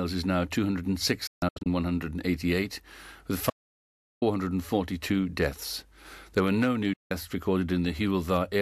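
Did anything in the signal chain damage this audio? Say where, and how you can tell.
Yes. Digital broadcast dropout at 1.27–1.67 s and 6.93–7.11 s. The receiver muted on bad frames with 8 ms fades, leaving scattered holes (264 ms lost) and then a 168 ms gap.

Audio dropout to silence from 3.50 to 4.22 s: a clean cut to silence, with no room tone, likely from a lost input link while recording continued.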